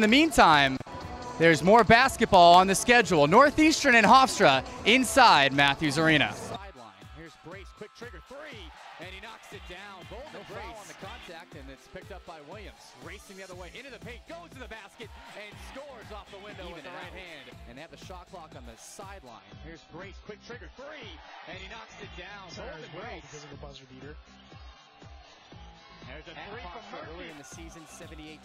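An adaptive stream dropping to a lower bitrate runs from 19.29 to 27.29 s. The audio switches abruptly, with no gap, to a version with nothing above 7 kHz and stronger codec artefacts, which fits a step from about 96 kbit/s down to roughly 16 kbit/s AAC.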